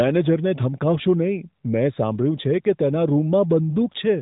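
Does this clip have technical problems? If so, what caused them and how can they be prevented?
No, there are no technical problems to report in this speech clip. It has passed through the AMR narrowband mobile codec at 12.2 kbps, so nothing above 4 kHz comes through and only light coding damage can be heard.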